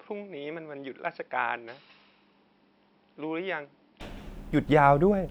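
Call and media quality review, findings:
Input switched to a poorer device, 0.0–4.01 s: dull, boxy, nothing above 5.5 kHz, about 10 dB quieter, faint new background noise. Likely a microphone change; level and noise shift rule out codec band-limiting.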